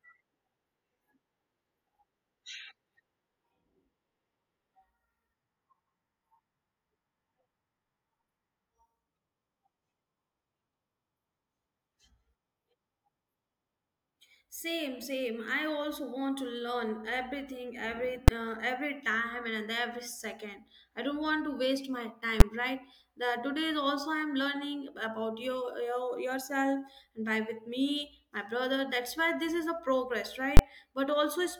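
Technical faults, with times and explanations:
18.28 s, 22.40 s and 30.57 to 30.59 s, invalid numbers at full scale: a calculation went infinite or invalid, and each result was pinned to the largest possible value for a whole processing block, roughly 5, 10 and 20 ms long. The first two blocks are so short that each lands as a single loud bang. The 20 ms block is long enough for its start and end edges to come through as a sharp pop. Unlike ordinary clipping, the level does not follow the speech: the signal jumps abruptly to an extreme value far beyond the speech peaks and stays flat for exactly one block.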